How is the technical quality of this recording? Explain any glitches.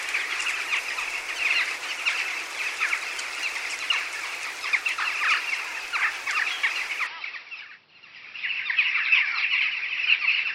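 The quality drops near the end. From 7.07 s to the end, the sound turns dull, with nothing above 5.7 kHz and a new noise floor about 35 dB down. The switch is seamless. This is likely an input switched to a poorer device.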